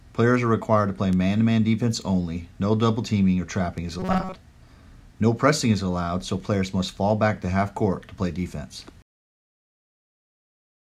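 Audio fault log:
4.00–4.35 s, robotic sound from repeated short buffers: the sound turns into a rigid, metallic buzz fixed at 188 Hz. The likely cause is new audio arriving too seldom, so a segment of about 5.3 ms is looped to fill the gaps, replacing most of the real audio.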